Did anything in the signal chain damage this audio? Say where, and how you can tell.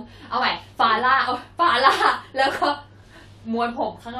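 No, no damage is audible.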